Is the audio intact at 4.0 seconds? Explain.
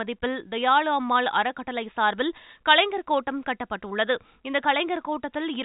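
Yes, the audio is intact at 4.0 seconds, with nothing there beyond the ordinary narrow telephone band of G.711 coding, which stops short of 3.8 kHz.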